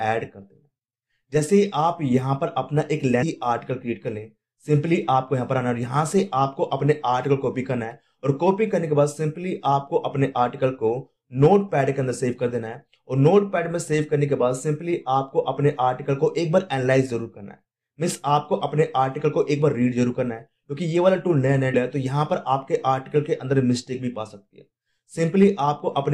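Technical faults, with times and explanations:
3.21 s and 21.73 s, compressed frames skipped: at each point the audio jumps ahead by about a fifth of a second, which fits roughly ten lost frames. On a spectrogram, a vertical seam splices mismatched content.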